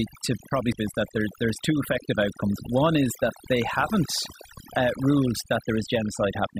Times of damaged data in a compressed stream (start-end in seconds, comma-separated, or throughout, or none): 0.72